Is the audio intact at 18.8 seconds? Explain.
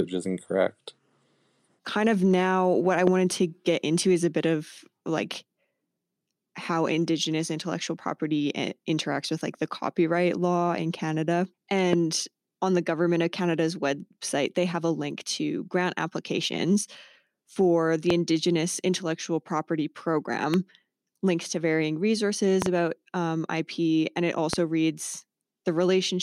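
Yes, the speech at 18.8 seconds plays through cleanly, with no dropout, click, distortion or other audible fault at that moment.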